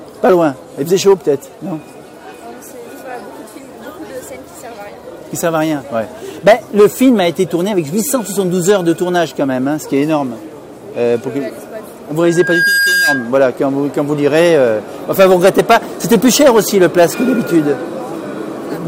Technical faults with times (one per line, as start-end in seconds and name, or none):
12.23-13.31 loudspeaker feedback squeal